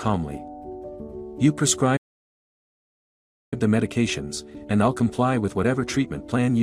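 At 1.96 s the sound stops in mid-flow. Silence follows for about 1.55 s, until 3.54 s. This is a playback stall. The player most likely ran out of buffered data, or its output thread was blocked, so nothing reached the output. When it recovers, the audio resumes. The gap is long enough to break the flow clearly.

From 3.54 s to 6.54 s comes a time-compressed catch-up. The player is working off the backlog left by the stall. It cuts out small pieces and cross-fades across the joins. The result runs at about 1.15 times normal speed, yet the pitch stays where it was. The sound feels hurried for those three seconds.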